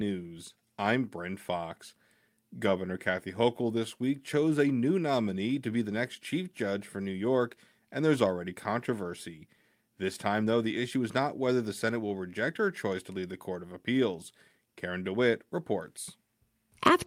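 Clock drift between sender and receiver runs throughout the clip: the sender's clock is roughly 3% slower than the receiver's, so the jitter buffer keeps draining. Unlike a single dropout from packet loss, this is a steady mismatch behind uneven, recurring hiccups rather than one clean gap.

Repeated timing corrections follow from 0.59 to 16.93 s. The receiver keeps repeating short slices to fill the shortfall, running the speech at 97% speed and adding about 0.4 s overall. These corrections are scattered, one-directional, and irregularly spaced, which distinguishes them from a smooth, constant time-stretch.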